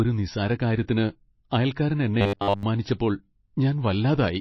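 Across the whole speech clip the audio sounds watery and swirly, with soft, smeared consonants and no high treble. This is MP3 compression, likely at a bitrate as low as about 24 kbps. With so few bits available, the encoder discards the treble at a fixed cutoff and drops weak frequency lines that flicker on and off between frames. A spectrogram shows a hard ceiling and patchy, blocky holes beneath it.

From 2.21 to 2.63 s, just after "നിസ്സാരകാര്യത്തിന് അയൽക്കാരൻ", the sound becomes a rigid, metallic buzz at 100 Hz that only loosely follows the speech. This is robotic sound from repeated short buffers, likely caused by audio arriving too seldom. The playback fills each gap by looping the last fragment of roughly 10 ms and skips most of the real audio in that span. On a waveform this appears as an identical short shape tiled end to end. A spectrogram shows evenly spaced horizontal harmonics at multiples of 100 Hz.

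At 2.98 s a short hiss comes just before a sharp attack, and the attack itself sounds blunted. This is pre-echo. The codec spreads quantisation noise sized for the loud onset across the whole block, so about 17 ms of noise spills into the quiet moment before it. A spectrogram shows a thin, broadband smear ahead of the onset's vertical edge. A waveform shows low-level fuzz where there should be near-silence.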